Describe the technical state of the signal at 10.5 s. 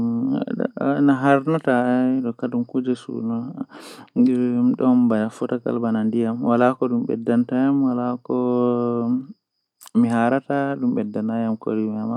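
At 10.5 s the speech signal is intact, with no fault present at that moment.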